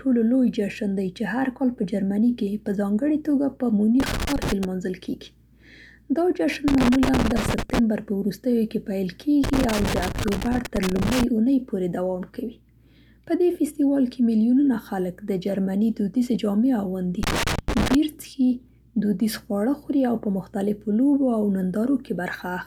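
A worn or dirty contact in the signal path is repeatedly losing and regaining connection, chopping the speech into irregular crackle and scratching. This loose connector crackle bursts at 4.00–4.65 s, 6.68–7.79 s, 9.44–11.24 s (the longest) and 17.23–17.95 s.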